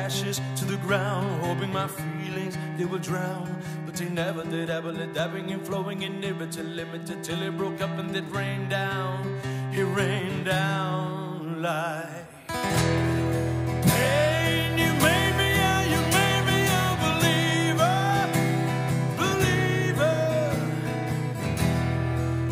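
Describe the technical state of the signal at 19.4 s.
At 19.4 s the signal is intact, with no audible fault at that point.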